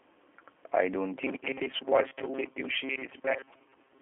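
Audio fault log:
throughout: G.729 codec. Nothing above 3.7 kHz and a plainly rough, synthetic texture, which fits 8 kbit/s model-based rebuilding rather than simple band-limiting.
1.14 to 4.02 s: robotic sound from repeated short buffers. A fixed 134 Hz metallic buzz, likely from 7.5 ms repeats replacing about half the audio, unlike the codec's unpitched roughness.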